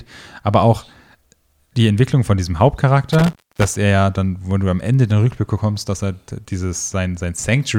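Speech, with an intermittent contact fault between 3.12 and 3.77 s, just after "von diesem" and before "er ja dann". A loose plug or cable opens the line for about 290 ms, so the signal drops out with crackle at each edge and only faint hiss remains.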